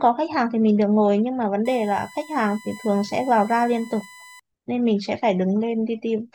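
From 1.65 to 4.40 s, USB current drawn in 1 ms frames leaks in as USB whine: a steady 1 kHz tone, strongest at 2 kHz, faintly under the speech.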